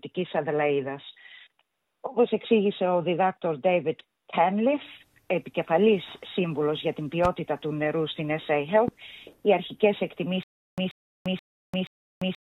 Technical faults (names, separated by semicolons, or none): loud pop; stutter with silent gaps